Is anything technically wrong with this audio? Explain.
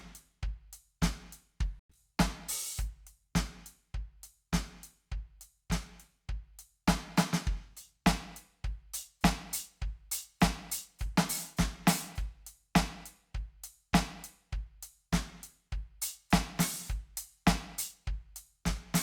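Yes. There is a burst of packet loss from 1.79 to 1.93 s. About 120 ms of the music never arrived. The receiver stretched the last sound to cover it, fading to near silence for about 100 ms. Playback then jumps ahead, skipping that passage.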